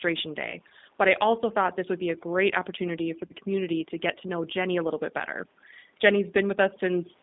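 From the very start, this speech runs through a G.729 codec. The voice sounds slightly rough and synthetic, as if rebuilt from a filter and a few pulses rather than carried whole. The band sits between 200 Hz and about 3.7 kHz, and the damage is plainly audible. The character fits an 8 kbit/s G.729A call leg.

Overdone noise removal runs across the whole clip too. The suppressor cut every band it judged close to noise. The background drops and breaks up into little twinkling specks, and quieter parts of the voice went with it.

At 0.50 to 0.58 s there's VoIP packet loss concealed by the speech codec. A stretch of about 30 ms, which fits one lost packet, was patched by extending the last pitch and filter at falling gain. It smears into a brief stretched sound that fades, and the voice stays a bit weak for a moment after.

The same thing happens again at 3.27 to 3.33 s, another 30 ms hole papered over the same way, with the same smear and short recovery.

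The call microphone processing, taking out only the lowest bass, is working as it should.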